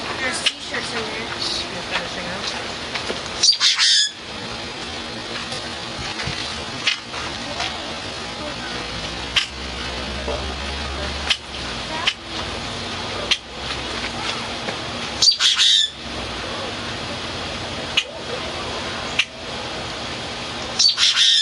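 Across the whole recording the level keeps pumping, with a swing of around 15 dB. Loud and quiet moments sit unnaturally close in level, giving a squashed, flattened quality. This is gain pumping, most likely from input gain set far too high and a fast limiter or compressor clamping down on each peak, then releasing.

From 4.28 s to 11.04 s the pace suddenly drags while the pitch stays put. Everything runs at roughly 0.62 times its normal speed. This is a time-stretched section, likely software lengthening the audio to fill a set duration by repeating short slices to hold the pitch steady.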